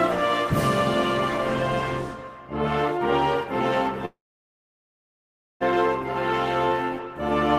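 A call audio freeze runs from 4.05 to 5.63 s: the sound fades to about 1.4 s of silence, then resumes where it stopped with nothing lost, unlike a dropout. The likely cause is delayed packets.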